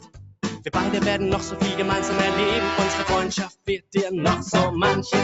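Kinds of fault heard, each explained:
Noise suppressor applied to music or sounds: A speech-tuned suppressor stays on throughout. It treats steady parts as noise, so the level swings by around 10 dB and the sound pumps, flutters or thins out.
Sound cut by the noise suppressor: From 0.0 to 0.71 s and 3.47 to 3.95 s, sustained sound is judged as noise and sinks, dropping by up to about 21 dB.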